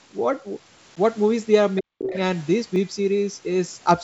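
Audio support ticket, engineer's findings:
Block of digital silence at 0.96 s: a 10.7 ms dropout with hard edges, heard as a tick or dip. The length fits a 512-sample buffer. Likely the output buffer was not filled in time, so zeros went out with no fade. Second block of digital silence at 2.76 s: only 0.69 ms, a single tick from the abrupt jump to zero and back.

Speech suppressed in double talk, 1.79 to 2.14 s: the talker's level dips, roughly 40 dB down at its deepest, for about a third of a second in total. Likely the echo canceller, which could not separate near speech from loudspeaker echo while both sides talked and attenuated both.

Other side's voice leaking through, 2.12 to 2.18 s: a short scrap of a second voice, well below the talker. Likely residual loudspeaker echo that the canceller failed to remove from the microphone signal.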